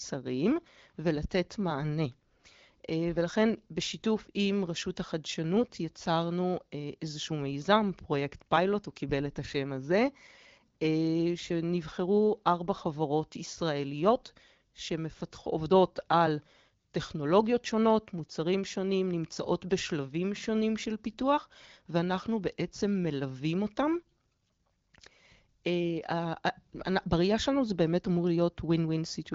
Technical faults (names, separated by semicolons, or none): none